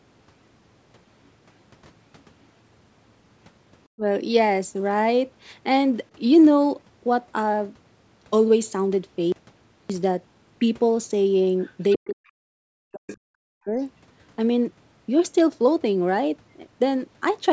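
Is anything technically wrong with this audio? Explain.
Yes, there are three kinds of fault in this speech.

Speech suppressed in double talk at 3.96–4.04, 11.97–12.24 and 12.51–13.79 s: the talker dips by up to about 40 dB, likely because the echo canceller couldn't separate the talker from the far side.

Audio dropout to silence at 9.32–9.90 s: 574 ms of silence with no room tone, likely from lost input while silence kept being written.

Other side's voice leaking through at 11.64–11.69, 11.91–12.06, 13.08–13.17 and 13.80–13.84 s: scraps about 10 to 40 dB below the talker, likely loudspeaker echo the canceller missed. Nothing above 8 kHz comes through, which is just the call's normal microphone processing.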